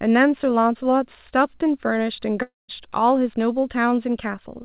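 At 2.42 s the speech stops and a fading buzz takes its place. This continues the last sound for a short while, then gives way to about 0.18 s of silence. Speech returns at 2.71 s, but roughly 270 ms of it never plays. This is likely a long network dropout: packets stopped arriving, and the receiver filled the gap before going quiet. Through the G.711 call path, nothing is heard above 4 kHz.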